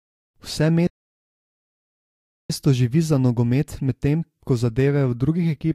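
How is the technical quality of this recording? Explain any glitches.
The recording has one clear glitch, a playback stall. At 0.87 s the speech cuts out abruptly in mid-flow. Silence follows for about 1.6 s, until 2.50 s. Then the audio picks up again. A gap like this most likely means the player ran out of buffered data, or its playback thread was blocked. With nothing to send to the output, it went silent until it recovered.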